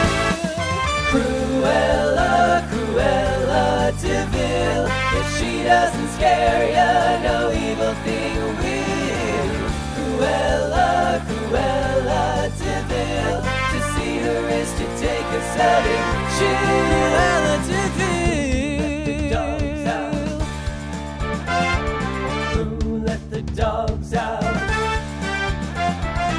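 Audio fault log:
Nothing stood out on listening to this audio.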